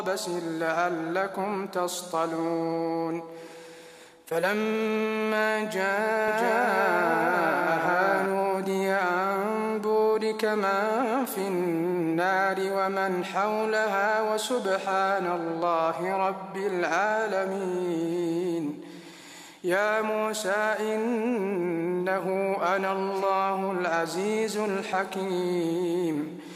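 From 6.28 to 8.26 s, a doubled audio track appears. A second full-band copy trails the original by roughly 0.7 s, somewhat quieter. It has no decay or room colour, and it starts and stops abruptly. A slower second capture path is the likely cause.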